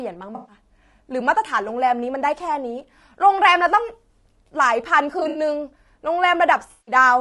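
Throughout the speech the voice sounds rough and grainy, with a hiss between the harmonics and a thin, somewhat synthetic top band. This is most likely low-delay AAC compression, the AAC-ELD kind used for video calls. Its very short frames cannot separate closely spaced pitch harmonics well, so at a rate that sounds to be around 32 kbps the damage is plainly audible.

From 0.35 to 0.55 s the sound turns into a smeared, noisy patch. This is AAC frame loss with concealment, covering about 120 ms. The decoder rebuilds the missing stretch from the last good spectrum, and that reconstruction is the smear you hear. From 5.19 to 5.39 s the same fault returns in broken form. About 100 ms of gaps are spread across 160 ms, and the longest unbroken run is around 70 ms, so it comes across as a phasey flutter. From 6.72 to 6.95 s a longer concealed gap of about 160 ms gives another blurred, noisy stretch.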